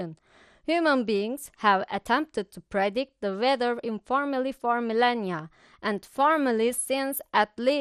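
Throughout the speech, the encoder has likely run short of bits in an MP2 compression stage, with MPEG Layer II dividing the signal into equal sub-bands and starving the upper ones. Nothing survives above about 14.3 kHz, so the sound is dull, and the remaining bands are quantised coarsely enough to give a plainly audible gurgling, granular roughness, which fits a low rate around 64 kbps.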